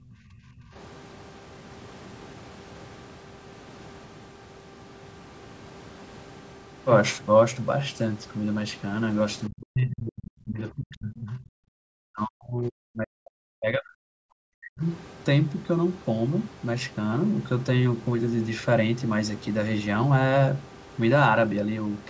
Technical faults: speech suppressed in double talk

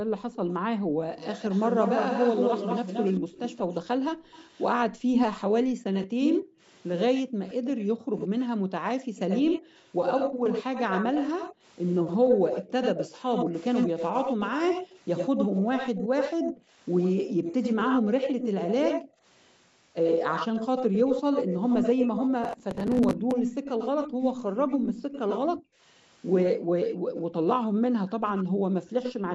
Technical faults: background gated by the echo canceller; echo leak; processor overload crackle

